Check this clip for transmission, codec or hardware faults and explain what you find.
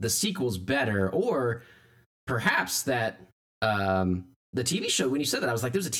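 There's one fault, and it runs the whole way through: channel delay causing comb filtering. One side arrives around 10 ms late, so the mono sum cancels at evenly spaced frequencies starting near 50 Hz. The speech sounds hollow and phasey from start to finish.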